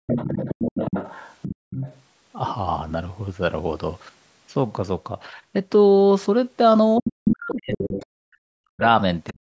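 Speech recorded through call microphone processing, with nothing above 8 kHz. Background gated by the echo canceller shows as room-sound dropouts of about 39 dB at 0.0–0.06 s and 1.56–1.7 s, where suppression clamped the microphone while the loudspeaker played. The other side's voice leaks through from 0.06 to 2.01 s and from 7.07 to 8.06 s, about 10 dB below the talker, plus a brief fragment at 9.27–9.32 s, about 25 dB down, likely residual loudspeaker echo the canceller failed to remove. Speech is suppressed in double talk at 7.0–8.06 s, 8.38–8.82 s and 9.31–9.53 s, dipping by roughly 40 dB, likely because the canceller attenuated the near talker along with the echo.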